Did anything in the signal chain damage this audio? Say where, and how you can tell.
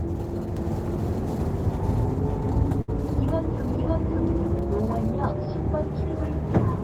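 Yes. From 0.57 s to 4.59 s there is a doubled audio track: a full-band copy, about as loud as the original, trails by roughly half a second, with no decay or room colour, and starts and stops abruptly. The likely cause is a second, slower capture path or an edit holding two misaligned copies. On the waveform every event reappears shifted; the spectrogram shows each pattern duplicated side by side.

At 2.81 to 2.90 s a burst of packet loss on the network path breaks the sound. The receiver filled 64 ms by extending the last sound and turning it down, then resumed with 60 ms missing. The spectrogram shows a smeared band dimming, then a hard jump to new content.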